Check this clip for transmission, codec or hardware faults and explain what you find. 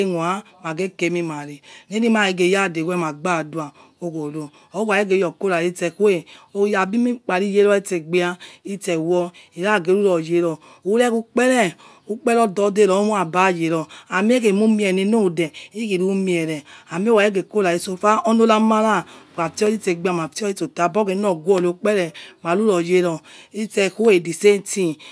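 Nothing stood out on listening to this speech recording.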